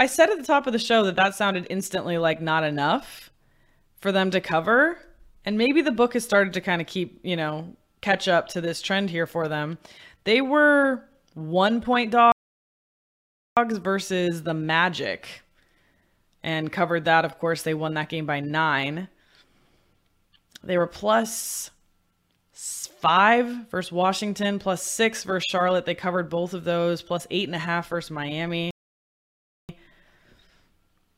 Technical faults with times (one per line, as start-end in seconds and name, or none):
12.32-13.57 playback stall
28.71-29.69 playback stall